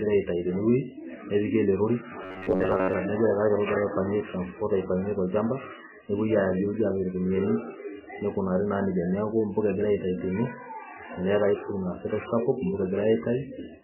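From start to finish, the speech is degraded. The damage is heavy. Weak detail flickers in and out, giving a watery, swirling texture. Sibilants chirp metallically and consonant attacks smear. This is likely MP3 compression at a very low bitrate, around 8 kbps. Starved of bits, the encoder drops the treble and zeroes faint frequency lines frame by frame.

From 2.23 to 2.93 s, the speech turns into a rigid, metallic buzz. It sits at a fixed pitch of about 94 Hz. The rough shape of the speech still comes through underneath. The likely cause is robotic sound from repeated short buffers. Fresh audio arrives too rarely, so the last fragment is replayed to fill the gap. Most of the real audio in this stretch is lost. The repeat period fits a buffer of about 10.7 ms.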